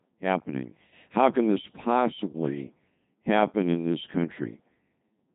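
From start to finish, the speech carries heavy Codec 2 vocoder damage. Rather than preserving the waveform, the decoder rebuilds the voice from sine waves driven by pitch, voicing, energy and a coarse spectral envelope, and the sound points to a low-rate mode near 2.4 kbit/s. The result is robotic and buzzy. A spectrogram shows evenly spaced synthetic harmonics and nothing above 3.8 kHz, while the waveform looks smooth and periodic rather than natural.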